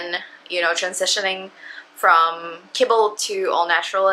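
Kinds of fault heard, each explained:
Nothing here stands out as a technical fault; the sound just carries on steadily without any glitch or disturbance catching the ear.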